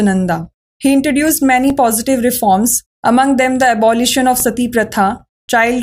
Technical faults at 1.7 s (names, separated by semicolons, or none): underrun with held sample